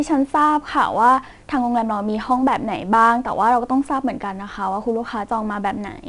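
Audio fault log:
throughout 4-bit ADPCM compression: coarse 4-bit prediction steps leave a plainly audible gritty hiss that rides louder speech, and nothing above 10.7 kHz dulls it, which fits a stream around 88 kbps.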